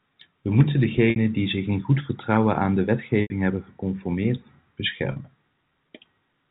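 At 1.10–1.16 s, 3.22–3.30 s and 5.12–5.16 s, packet loss with pitch repetition bridges 40–80 ms gaps with a repeated pitch period, giving a buzzy hold. On a spectrogram, frozen, evenly spaced harmonic stripes fade out.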